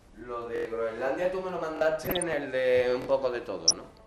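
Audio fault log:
Throughout: MP2 compression. The sound is dull, with gurgling, granular distortion and flickering upper bands, likely from MP2 coding at 80 kbps. It is steady, unlike the brief burbling bursts.
0.56–0.65 s, 1.77–1.81 s, 3.02–3.07 s: repeated buffer. A piece of about 23 ms, which fits a 1024-sample buffer, replays with hard joins. It plays four extra times at the first point and twice at each later one, giving a rhythmic stutter rather than random chirps.
2.03–2.33 s, 3.68–3.75 s: DAB burbling. Bit errors corrupt the coded data, so short blips of noise appear in single sub-bands. This gives brief noise blips, irregular rather than repeating.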